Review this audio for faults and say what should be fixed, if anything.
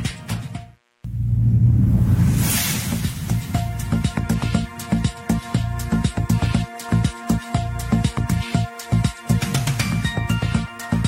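Nothing here needs fixing, as no faults can be heard anywhere in the recording. No corrective work is called for.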